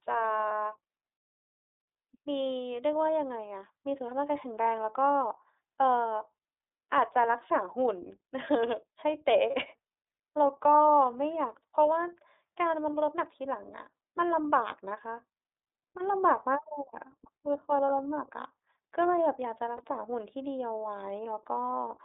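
Speech heard through the iLBC codec throughout. The band runs only from about 300 Hz to 3.7 kHz, and the voice sounds rough and slightly synthetic, which fits iLBC's 30 ms frame mode at 13.33 kbps. The coding damage is plainly audible. Lost iLBC frames interrupt the audio at 0.48 s, 9.51 s and 19.77 s. Each gap is about 30 ms, one missing frame. The decoder fills it by repeating the last pitch cycle with added noise, so each gap sounds like a brief buzzy held vowel. Because each frame is coded independently, the voice recovers straight after.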